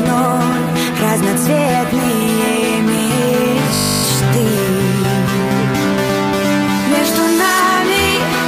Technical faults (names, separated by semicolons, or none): system hang loop